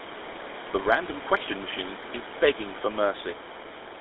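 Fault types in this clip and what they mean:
GSM full-rate codec: This is the original GSM phone codec, which models the vocal tract and excites it with a sparse, regularly spaced pulse train, discarding most of the excitation detail. Here the speech has that clear buzzy, gravelly roughness throughout, and it's squeezed into a narrow line band of roughly 300 Hz to 3.7 kHz, which fits a 13 kbps full-rate link. The room noise sits about 13 dB under the speech.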